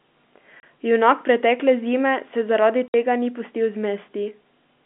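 Speech on a narrow telephone band, with packet loss filled with silence: a 30 ms hole at 0.60 to 0.63 s and a 60 ms hole at 2.88 to 2.94 s. The holes have abrupt edges, and the lengths point to one and two missing 30 ms packets replaced by digital silence.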